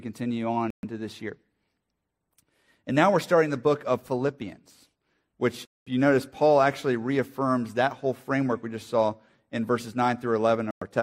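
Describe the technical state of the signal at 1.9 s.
At 1.9 s the signal is intact, with no audible fault at that moment.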